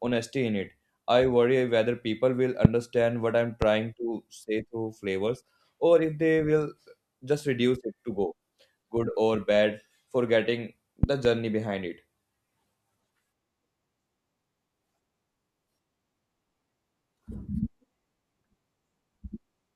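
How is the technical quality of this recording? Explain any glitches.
Four loud pops, in three bursts, break into the speech, all sharp, brief spikes that jump well above the level of the talking while the speech carries on underneath.

The first, at 2.65 to 2.67 s, just after "worry whether people will", is the loudest single pop, peaking roughly 25 dB above the speech. A second, at 3.62 to 3.65 s, between "what I'm" and "to say through flavors", is softer at about 15 dB over the signal. At 11.03 to 11.27 s, after "good or bad forgetting" and before "behind it", two pops land in quick succession, again about 15 dB up. Each is likely caused by a sudden voltage jolt, such as a connector being disturbed, a switch, a static discharge or a driver glitch, added onto the signal and then shaped by the circuitry downstream into a short thump.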